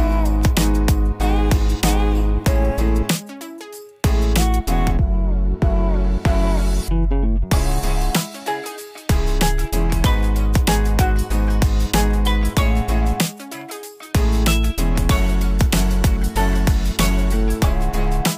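Nothing here jumps out as a fault; the audio just runs along without any glitch, dropout or distortion to point at.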